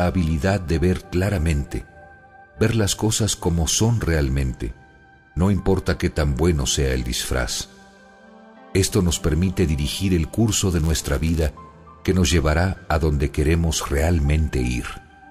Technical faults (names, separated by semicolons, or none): block size mismatch (padded)